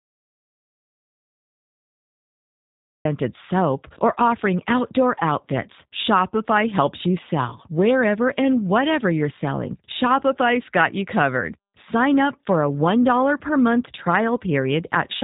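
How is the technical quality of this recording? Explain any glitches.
The recording has two clear problems: low-bitrate codec damage throughout, and an opening stretch of silence.

From the start until 3.05 s, an audio dropout to silence: the input was likely lost, so only dead digital silence was written, with no room tone, before speech resumes at "soap or offering outdoor".

Throughout, G.729 codec damage is plainly audible. Speech is rebuilt from a vocal-tract model and pulses, giving a rough, synthetic tone with nothing above 3.8 kHz, which fits an 8 kbit/s codec rather than simple band-limiting.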